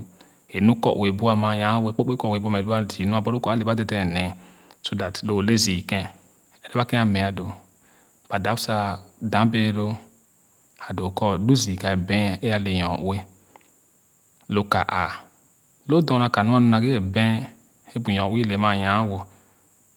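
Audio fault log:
No technical faults are present; the speech is clean throughout.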